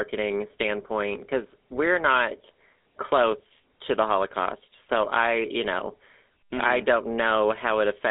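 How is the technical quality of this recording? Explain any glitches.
The technical quality is poor, with one fault across the whole recording. Throughout, the speech has passed through a GSM full-rate codec: the encoder models the vocal tract and rebuilds the excitation from sparse regular pulses, at a rate that fits 13 kbps. Nothing above 3.8 kHz survives, the line band runs roughly 250 Hz to 3.6 kHz, and the result is a thin, plainly audible buzzy, gravelly roughness.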